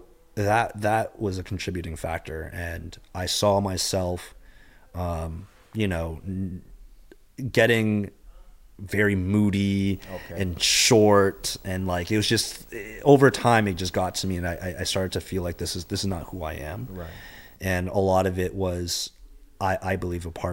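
Video or display buzz runs from 9.87 s to 17.56 s, where a screen or video cable couples into the speech path. The interference repeats at the picture's field rate of 59.94 Hz, giving a rasping buzz with hash layered above it. A thin, very high whine sits at the line rate of 15.7 kHz. The buzz is quiet, roughly 30 dB below the speech.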